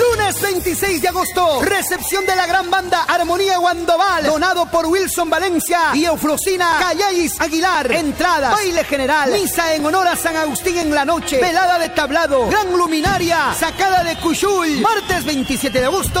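Regular ticks recur about every 1.02 s from 6.72 to 12.87 s, periodic USB or driver dropouts blanking a few milliseconds of audio to silence each time.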